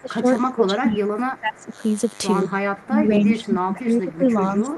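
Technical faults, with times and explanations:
Throughout: DECT cordless phone buzz. A steady, thin buzz sits under the speech for the whole clip, about 25 dB below it, with a 100 Hz fundamental and a dense stack of harmonics that gives it an edgy, raspy texture. It comes from a cordless handset or base station nearby sending a short radio burst every 10 ms. The audio circuitry rectifies each burst, so the burst rate itself becomes an audible tone.
0.01–0.26 s, 0.5–1.73 s and 2.84–4.78 s: speech suppressed in double talk. In each of these stretches the speech sinks, thins or breaks up in pieces. The first dip is roughly 20 dB, the second, about a second long, goes to roughly 25 dB, and the last, running to the end, is roughly 15 dB. The likely cause is the echo canceller failing to tell this talker from the far side's loudspeaker echo while both spoke at once, and attenuating everything.
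3.30–3.34 s: echo leak. A brief scrap of delayed sound, about 20 dB below the speech, arrives 278 ms after its original, inside the last suppressed stretch. It is most likely residual echo that the far end's canceller failed to remove. The loudspeaker sound reached its microphone and was sent back, so a faint, late copy slips through for a fraction of a second.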